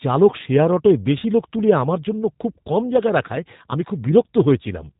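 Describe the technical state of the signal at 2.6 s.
At 2.6 s the speech carries G.729 codec damage, present across the whole clip rather than at that instant alone. The codec rebuilds each 10 ms frame from a vocal tract filter, a pitch predictor and a few pulses, a low-rate scheme that fits roughly 8 kbit/s. Nothing above 3.8 kHz survives, so the voice sounds band-limited, and the parametric rebuild gives it a plainly audible rough, slightly synthetic grain.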